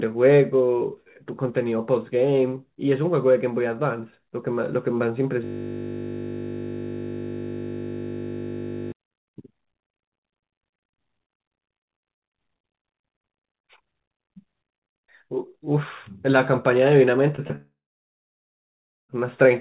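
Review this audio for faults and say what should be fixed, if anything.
From 5.45 to 8.92 s there's a system hang loop. The host or driver stalled while the sound hardware kept replaying one 20 ms slice of its ring buffer, 174 times over. Because the slice is so short, it repeats 50 times a second and you hear a steady 50 Hz buzz rather than a stutter, which fits a 20 ms output buffer. To prevent it, have the audio callback detect a stalled writer and output silence instead of replaying the stale buffer.

There's short concealed packet loss from 17.36 to 17.40 s and again from 17.48 to 17.52 s. Each time about 20 ms of audio never arrived, and the receiver patched roughly 17 to 18 ms of it by stretching the preceding sound before blending back in. Each one comes across as a tiny smear or wobble on the narrowband G.711 mu-law call audio, which has nothing above 4 kHz. To prevent it, use a larger jitter buffer or add forward error correction or redundancy so that isolated lost packets can be rebuilt.

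A long network dropout runs from 17.56 to 19.11 s. About 1.5 s of audio is missing, most likely because the stream stopped arriving. The concealment carries the last sound forward briefly and lets it fade, then about 1.3 s of near silence follows, and the audio resumes at 19.11 s without the lost stretch. The two short losses just before it suggest the link was already degrading. To prevent it, fix the connection's stability and bandwidth, and have the client flag or reconnect after sustained packet loss.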